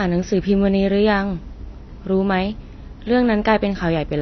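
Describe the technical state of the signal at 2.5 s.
At 2.5 s you're hearing the same damage that runs through the whole clip: the speech is dull and smeared, with a warbly, fizzy edge on sustained sounds and sibilants, and nothing at all above 6 kHz. That's most likely AAC compression. The encoder has pulled its cut-off down, which fits AAC-LC squeezed to a low bitrate of around 24 kbps. It's plainly audible.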